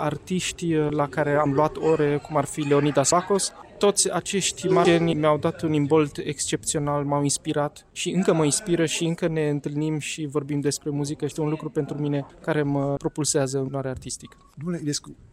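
At 1.46, 3.12, 4.85, 11.31 and 13.68 s you hear compressed frames skipped. Whole chunks of the encoded stream never reach the output, so the sound jumps forward: about 150 ms at the first two, roughly 400 ms at 4.85 s, about 200 ms at 11.31 s and around 300 ms at 13.68 s. The frames here are 32 ms long.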